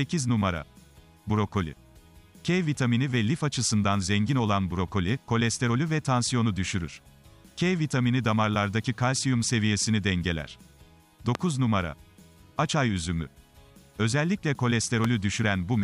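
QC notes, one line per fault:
11.35 to 11.37 s and 15.05 to 15.07 s, loud pop: each is a single sharp pop lasting about 20 ms and peaking roughly 15 dB above the surrounding level, with the sound continuing underneath. This is likely a voltage pulse from a plug, switch or static discharge added onto the signal. Because nothing is removed or muted, it differs from a dropout. Its length also sets it apart from a thin digital click.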